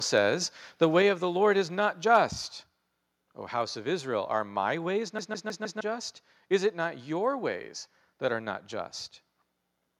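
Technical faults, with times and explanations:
2.04 s, microphone volume stepped down: the sound and its background fall together by about 2 dB in one abrupt step. This is likely the call software lowering the input gain. On the waveform the envelope drops to a slightly lower plateau at that instant.
2.14 to 2.17 s, microphone overload: a brief burst of harsh, crackly distortion on the loudest peak. The signal is about 2 dB over the converter's limit, likely from excessive input volume, so a few percent of samples are flattened. The waveform shows squared-off peak tops, and the spectrogram shows a smear of broadband upper harmonics.
5.19 to 5.81 s, CD stuck on one turn: a 0.16 s fragment plays four times in a row, with a short mute at each jump, giving a fast, even stutter. A scratch makes the player jump back one track every revolution. The spectrogram shows identical blocks with thin silent gaps between them.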